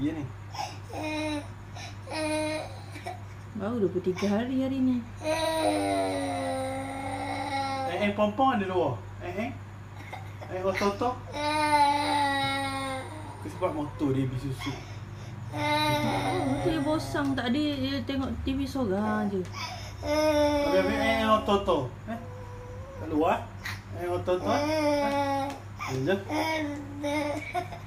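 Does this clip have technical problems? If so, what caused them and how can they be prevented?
No, nothing here points to a technical problem, so there's nothing that needs preventing.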